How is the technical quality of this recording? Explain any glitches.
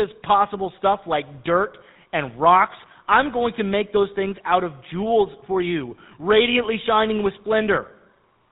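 Quality is limited by narrowband phone-codec coding throughout, plus one short burst of decoding damage.

GSM full-rate codec, throughout: pulse-driven vocal-tract modelling removes everything above 4 kHz, which fits 13 kbps coding, and leaves the speech plainly buzzy and gravelly.

GSM bit errors, 4.28–4.34 s, between "going to make those" and "out of jewels for": corrupted filter, pitch and gain values produce a brief squawk and gargle, which points to about three damaged frames.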